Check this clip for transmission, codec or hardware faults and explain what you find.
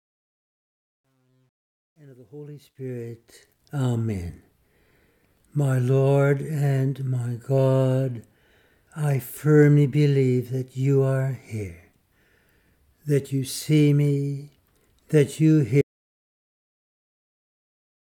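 Two faults are present: grainy truncation at the start of the fade-in, and a hard dropout to silence that runs to the end.

From 0.0 to 3.61 s there is truncation distortion on a fade, worst from 0.0 to 2.25 s. The fade-in's gain stage keeps too few bits and adds no dither, which fits about 11-bit resolution. The quietest part turns gritty. The waveform shows square staircase steps, and the spectrogram shows broadband hash.

At 15.82 s the audio drops out to silence and stays silent to the end. The input was likely lost, so silence was written. The sound stops abruptly, with no room tone. The waveform is a flat line, and the spectrogram is empty.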